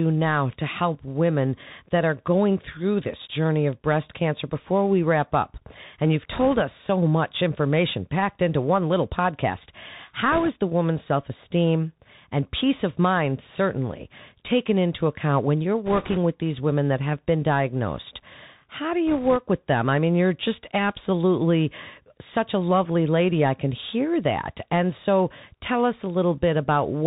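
The whole speech clip has gone through a Bluetooth CVSD headset codec, and it's plainly audible. The sound is squeezed into a narrow band with nothing above 4 kHz, there's a grainy hiss sitting underneath, and the s sounds come out scratchy where the one-bit delta coder's adaptive step can't keep up with fast high-frequency detail. That character fits a 64 kbps CVSD link.

On top of that there are four short bursts of bit errors on the Bluetooth voice link. The first runs from 6.32 to 6.61 s, just before "us so much information", at an error rate of around one and a half percent. The second, from 10.32 to 10.49 s, is heavier at about four percent. The third, from 15.86 to 16.18 s, is also about four percent and falls between "into account when you're" and "with these women that". The last runs from 19.07 to 19.36 s, just before "with them I mean", at around two percent. Because every CVSD bit carries the same small weight and errors fade quickly, none of these produce sharp clicks. 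Instead there's a rushing crackle over the speech, noticeably rougher in the four-percent bursts.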